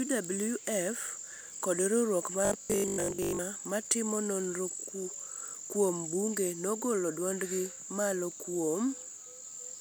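At 2.45 s, just after "kod riwruok", a Bluetooth stutter begins. It lasts until 3.39 s, ending before "ma timo nonro". Packets arrived late or not at all, so the receiver kept replaying its last short slice. About 630 ms of speech is lost across roughly 930 ms. The longest unbroken run is about 100 ms, heard as a buzzy, machine-gun repeat. The speech then jumps ahead, as if it had kept playing underneath.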